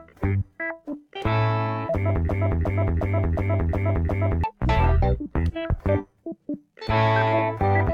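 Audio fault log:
2.29 to 4.44 s, broken-record loop: a 0.36 s fragment of sound repeats exactly, back to back, six times, and the audio due in that span never plays. A player, encoder or stream likely stalled and kept resending its last held fragment.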